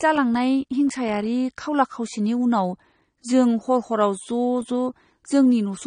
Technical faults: AAC compression

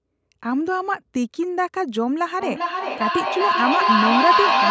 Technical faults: feedback howl

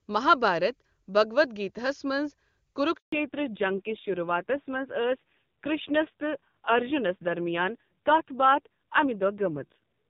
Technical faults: handover gap; fallback to narrowband

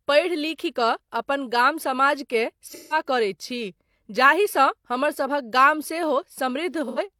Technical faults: AAC frame loss with concealment

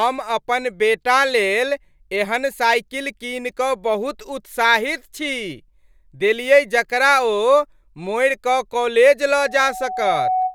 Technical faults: loudspeaker feedback squeal

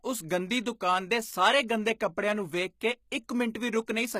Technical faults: HE-AAC compression

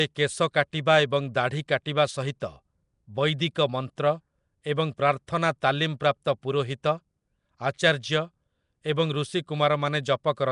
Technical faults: Nellymoser compression

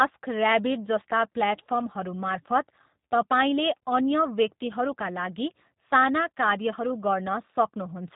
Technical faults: G.729 codec

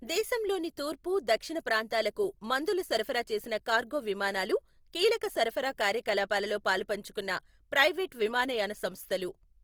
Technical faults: Opus compression

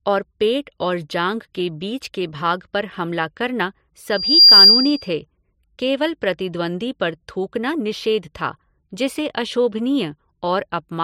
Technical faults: loudspeaker feedback squeal

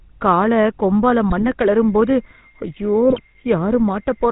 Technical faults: GSM full-rate codec; GSM bit errors; switching supply whistle

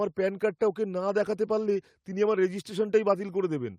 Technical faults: none

